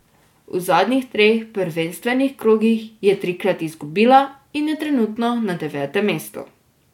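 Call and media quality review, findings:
No faults found in this speech recording. Nothing heard calls for a ticket entry.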